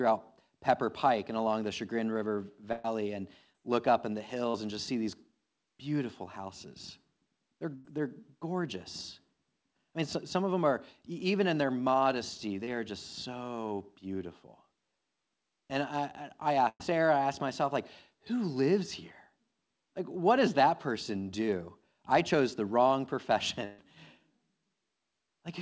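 Speech carried over a WebRTC call path, with nothing heard above 8 kHz, as a wideband call codec such as G.722 would leave it. Bursts of packet loss occur at 2.72–2.85 s, 7.75–7.85 s, 16.69–16.81 s and 23.65–23.79 s. In each, roughly a tenth of a second of audio is replaced by the receiver stretching the last sound into a held buzz or fading hiss. At 16.69 s it fades into about 40 ms of silence. Speech then resumes further on with a stretch skipped. Short concealed packet loss is much briefer, filling only 10 to 40 ms. It comes at 3.53 s just before "look up in the", at 4.50–4.55 s between "look up in the" and "and just see these", and at 12.64–12.68 s between "even in their modesty" and "are just so beautiful". These sound like a quick smear or wobble rather than an audible held tone and dropout.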